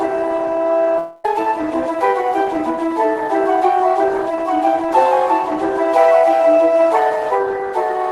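A long network dropout runs from 0.98 to 1.26 s. The sound stops advancing and the last fragment is stretched into a fading buzz that fills about 268 ms, with no stretch of true silence. When the audio resumes, roughly 200 ms of material is gone, so it picks up further along than where it broke off. This points to packets that were likely lost or held up in transit, and the playout delay shifts by around 50 ms afterwards.

A jitter buffer speed-up follows from 1.87 to 2.78 s. More audio had piled up in the receiver's buffer than it wants to hold, so it trims the backlog by cutting out many tiny slices, each one or a few pitch periods long. Playback runs at 105% of normal speed while the pitch stays put, which gives a slightly hurried, pressed-forward feel. About 50 ms of audio is removed in total across this stretch.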